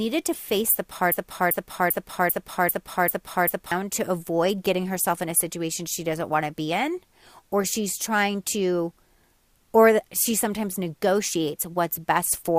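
A speech recording with two faults. From 0.33 to 0.36 s a corrupt frame was decoded, heard as a short glitch peaking at about -20 dBFS. Its length suggests roughly two damaged frames whose misread data put energy at the wrong frequencies, unlike a plain click, which is a single broadband spike. From 1.12 to 3.72 s a broken-record loop repeats a 393 ms fragment seven times, identically and without decay, so it is not an echo, and the speech that belongs there is lost. The likely cause is a stalled player or stream resending its last buffer.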